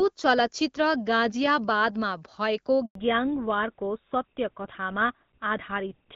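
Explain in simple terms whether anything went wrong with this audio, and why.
At 2.85 seconds the call goes completely silent for about a tenth of a second, until 2.95 seconds. This is a handover gap: the phone was switching the call from one network to another, and no sound was delivered during the switch, so whatever was said in that moment is simply lost. Unlike a dropout from a weak signal, it happens once, cleanly, and right where the call's sound quality changes.

From 2.95 seconds to the end, the speech sounds duller and rougher, as if heard through an old landline. This is a fallback to narrowband. Before the switch, the call ran on HD Voice and sounded clear and full. Afterwards, everything above 4 kHz is gone, which points to an older GSM-style codec taking over. Unlike muffling from a covered microphone, the change is sudden, begins right after the gap, and stays for the rest of the call.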